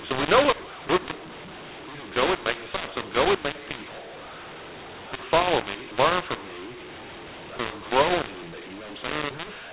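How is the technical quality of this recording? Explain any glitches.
The quality is poor. A mu-law and A-law mix-up runs throughout. The speech was coded as mu-law but decoded as A-law. Levels are scrambled, so the sound is harsh, and pauses fill with noise. The telephone band still cuts off at 4 kHz.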